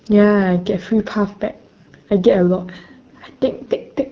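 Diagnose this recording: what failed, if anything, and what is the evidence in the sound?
AMR wideband (HD Voice) codec damage, present from start to finish, places the failure at the codec stage. The speech is rough and raspy throughout, which fits one of the two lowest AMR-WB rates, around 8.85 kbit/s. At that rate the pulse-driven vocal tract model gets too few bits to describe each excitation, so the voice turns coarse and grainy. The band above 6.4 kHz carries only shaped noise, not real speech detail.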